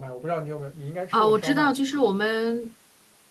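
No technical faults are audible anywhere in this speech recording.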